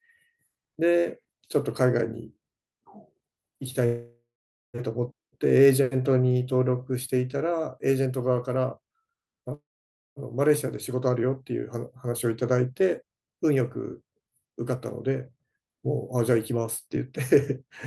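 At 3.85 s and again at 9.54 s, packets were likely held up in transit and the jitter buffer ran dry, producing a call audio freeze. The receiver stretched the last sound into a fading buzz or hiss that fell to silence for about 0.47 s the first time and about 0.54 s the second. The speech then resumed where it stopped at 4.77 s and 10.19 s. Nothing was lost, but gaps of 0.88 s and 0.63 s were inserted, pushing everything after them later.

From 14.43 s to 17.05 s, the buffer had built up more audio than its target, and the receiver trimmed it back with a jitter buffer speed-up. It cut many short pitch-period slices in a row, removing about a fifth of a second in total. The speech in that stretch runs at 108% speed with its pitch unchanged, so it sounds hurried.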